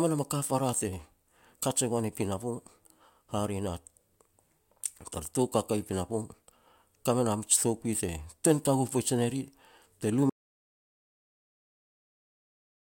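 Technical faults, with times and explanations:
10.30 to 12.86 s, audio dropout to silence: the speech cuts off mid-flow and the rest of the clip is silence with no room tone. The input was likely lost, through a disconnected device, failed link or mute, while recording continued writing silence.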